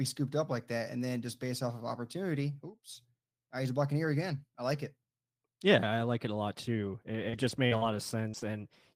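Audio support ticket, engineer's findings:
Repeated packet loss (robotic sound), 7.29–8.73 s. Choppy speech across five short dropouts, longest 45 ms, about 180 ms missing. Network path/jitter buffer: concealment extends the last audio to bridge each hole, covering about 12% of the span.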